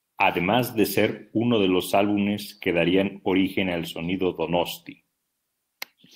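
No technical faults can be heard anywhere in this recording.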